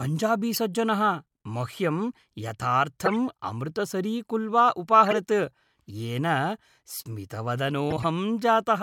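The speech has five corrupt frames decoded despite flipped bits, at 0.54–0.58 s, 1.99 s, 3.06–3.14 s, 5.06–5.16 s and 7.90–8.04 s. Misread gains and codes put energy at wrong frequencies over one to seven frames each. They are heard as brief chirps and noise bursts, the one at 3.06 s loudest and the one at 1.99 s faint.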